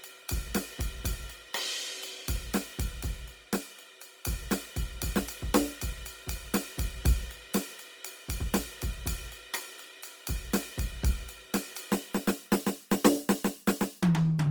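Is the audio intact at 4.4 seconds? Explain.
No. At 4.4 seconds, as across the whole music clip, you're hearing Opus compression damage, plainly audible. The top end still reaches to about 20.2 kHz, so nothing sounds muffled or band-limited. The trouble is texture: tones come out grainy, rough and noisy, likely because a starved encoder in its music mode is filling bands with folded or noise-like content instead of real detail. That fits something around 24 kbps.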